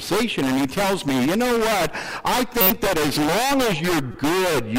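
Two corrupt frame decoded events break into the sound, a loud squeaky burst from 2.61 to 2.71 s peaking around -5 dBFS, then a fainter blip at 4.12 to 4.15 s. Flipped bits across a few compressed frames misplace energy, showing as short vertical smears on a spectrogram and abrupt spikes in the waveform.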